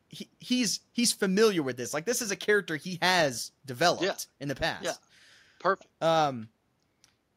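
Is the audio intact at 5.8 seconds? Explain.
Yes, the speech at 5.8 seconds plays through cleanly, with no dropout, click or other fault at that moment.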